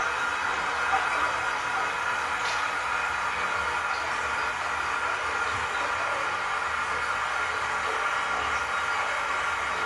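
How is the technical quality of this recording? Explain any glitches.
The technical quality is poor, with clear lossy-coding damage throughout. From start to finish the sound is dull and smeared, with a warbling, fizzy texture on sustained and hissy parts, and the top end stops dead at about 11.5 kHz. This is most likely AAC compression. The encoder drops high frequencies entirely, quantises what remains coarsely, leaves gaps in the spectrum, and fills some bands with substitute noise. The damage is consistent with AAC-LC at roughly 32 kbps.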